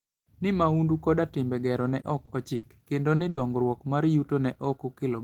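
Short concealed packet loss hits at 2.01, 2.25 (just after "timbe gero ne ok") and 3.15 s. In each, 20, 20 and then 40 ms of missing speech is patched by extending the previous sound, heard as a quick smear or wobble and seen as a brief smoothed, repeated stretch in the spectrogram. A burst of packet loss follows at 2.55 to 2.65 s, between "timbe gero ne ok" and "kendo ni", and again at 3.29 to 3.39 s after "kendo ni". In each, about 80 ms is lost and filled with a held buzz or a fading hiss, then the speech resumes with that section gone. The waveform shows a decaying plateau, and the spectrogram shows frozen harmonics or hiss.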